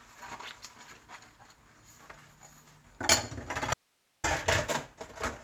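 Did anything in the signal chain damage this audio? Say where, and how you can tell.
Yes. At 3.74 s the sound cuts off abruptly and comes back just as suddenly at 4.24 s, leaving half a second that holds nothing but hiss sitting far below the normal signal level. This is an audio dropout to a faint residue, not a pause or a fade. The likely stage is the analogue wiring, where a momentary break in the source connection silenced the feed while the preamp and converter downstream stayed live and kept passing their own noise floor.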